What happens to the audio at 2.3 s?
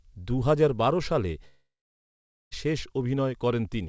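At 2.3 s the audio is silent, inside a gap from 1.48 to 2.53 s that starts just after "দুহাজার বারো সালে" and is likely a long network dropout. About 1.04 s of audio never arrived. The receiver stretched the last sound into a brief fading buzz, then left about 0.85 s of silence. On a spectrogram, a smeared, decaying band (capped at 8 kHz by the G.722 call codec) gives way to a blank region, and the waveform goes flat before the audio resumes.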